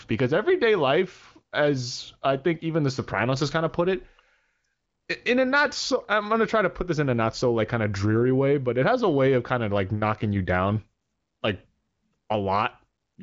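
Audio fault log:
Nothing to log here: the speech comes over an AMR wideband (HD Voice) path whose sound fits its 23.05 kbit/s mode, with nothing above about 7.5 kHz.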